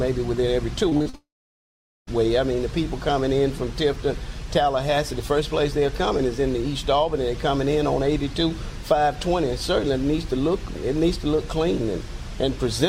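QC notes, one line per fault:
0.89–1.15 s, repeated packet loss (robotic sound): four short holes, the longest 37 ms, open in quick succession. Each is patched by stretching the preceding sound, so nearly half of this stretch is synthetic fill, giving a choppy texture with pieces missing.
1.15–2.09 s, long network dropout: about 0.92 s of audio never arrives. A brief buzzy or hissy continuation of the last sound fades out, then roughly 0.81 s of silence follows before audio resumes, with the lost section absent. This is likely a sustained network outage.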